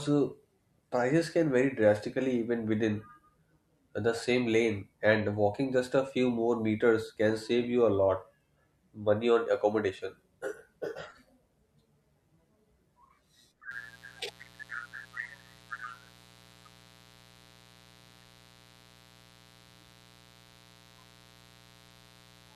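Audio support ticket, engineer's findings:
Mains buzz, 13.71 s to 22.55 s, continuing to the end of the clip. Steady raspy buzz on 60 Hz mains, roughly 30 dB under the speech. Probable source is a dimmer, rectifier or unshielded cable injecting switching spikes twice per cycle. Sharp spikes give 60 Hz harmonics extending into the kHz range.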